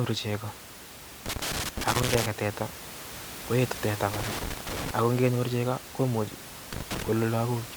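Speech recording with loose connector crackle: irregular scratchy bursts at 1.26–2.26 s, 4.14–4.91 s (between "koetu teta" and "ako ngenyor chegoo komuche"), and 6.73–7.08 s after "ako ngenyor chegoo komuche". A worn or dirty contact is intermittently breaking the signal path, chopping the audio, while the room noise sits about 14 dB below the speech.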